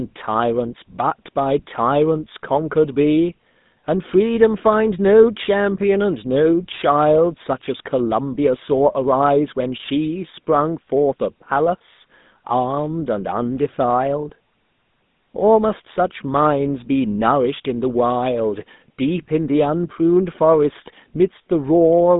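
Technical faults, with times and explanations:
Throughout, GSM full-rate codec: the speech has a plainly audible buzzy, gravelly roughness and a boxy, phone-line quality, with the low end thinned below about 150 Hz and nothing at all above 3.8 kHz. The codec rebuilds the voice from a vocal-tract model driven by a coarse, regularly spaced pulse train, keeping only a fraction of the excitation, and that sparse pulse source is what grates. The roughness fits a 13 kbps full-rate stream.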